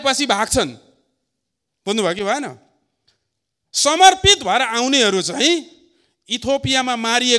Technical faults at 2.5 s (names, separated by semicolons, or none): none